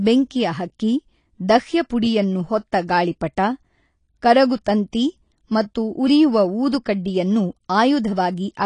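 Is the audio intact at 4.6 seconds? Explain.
No. At 4.6 seconds, as throughout, the speech sounds dull and smeared with nothing above 10.1 kHz, likely AAC compression at a low bitrate, around 32 kbps.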